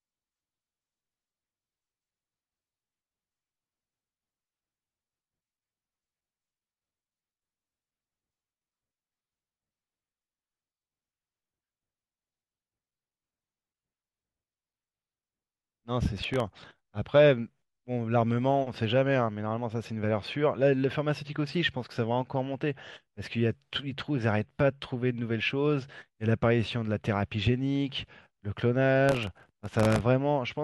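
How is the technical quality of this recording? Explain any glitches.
The recording has two bursts of processor overload crackle, from 16.17 to 16.89 s and from 29.09 to 30.01 s. In both, the processor fell behind and repeatedly missed deadlines for very short audio buffers, dozens of them, which fits buffers well under a millisecond long. Each missed buffer was filled with a repeat of old audio whose edges do not join the speech around it. These rapid hard-edged splices produce a gritty, tearing crackle over the speech that stops when the overload passes. The second burst is longer and denser.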